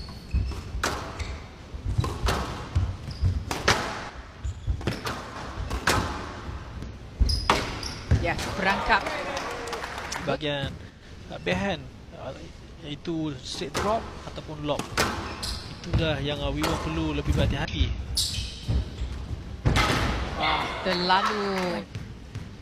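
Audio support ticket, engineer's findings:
Damaged data in a compressed stream: short chirp/blip at 3.67–3.73 s, 6.83 s, 14.82–14.87 s and 17.65–17.70 s. Decoder side. Corrupt frames misread, sync lost, resync at next frame header. Tells apart from a channel loss: a brief squawk, no sustained level change.

Level dip of about 6 dB at 4.10–5.36 s and 10.90–11.03 s. Likely one channel drops out before the mono downmix: shared content halves, content unique to the missing side vanishes. Tells apart from corruption: a clean, steady drop with no chirp and no skip, then an abrupt return.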